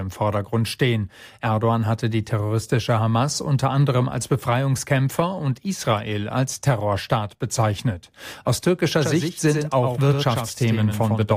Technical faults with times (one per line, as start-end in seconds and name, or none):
9.02-11.37 doubled audio track